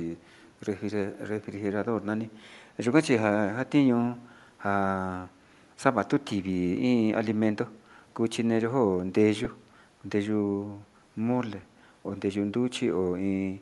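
Bluetooth LC3 compression runs through the whole speech clip, likely the cause of the plainly audible breathy, grainy edge. The upper spectrum sounds thinned and noise-filled, which fits an LC3 stream near 48 kbps with 10 ms frames, where the transform codec discards detail and substitutes noise.

An echo leak appears from 0.40 to 0.51 s: a very faint copy of the speech returns 231 ms late, far below the direct sound. A loudspeaker's echo canceller likely let part of its microphone pickup through, and that residue was sent back.

Lost LE Audio frames occur at 9.45 s and 11.62 s, each a 10 ms gap. The decoder covers the missing frame by reusing the previous spectrum with randomised signs.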